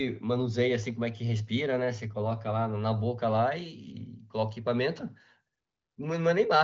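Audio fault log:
No faults are audible anywhere in this recording.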